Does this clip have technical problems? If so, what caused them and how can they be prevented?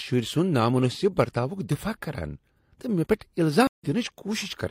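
Yes. At 3.67 s the speech drops out for about 140 ms and returns at 3.87 s. This is a stream reconnect: the connection failed, playback went silent, and the player reconnected and started a new decoder partway through the stream. The speech resumes at a later point, skipping roughly a tenth of a second, and the first frame after the gap fades in. Reliable transport with enough client-side buffering to ride out brief network interruptions prevents this.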